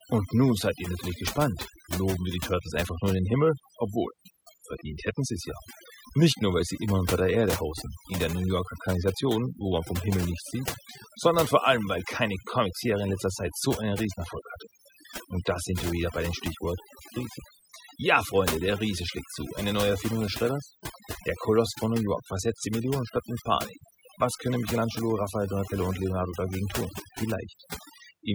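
From start to finish there's overdone noise removal. The denoiser was pushed too hard, so any band sitting near its noise estimate gets gated out, quieter voice detail included. The gaps go almost dead with little twinkly specks.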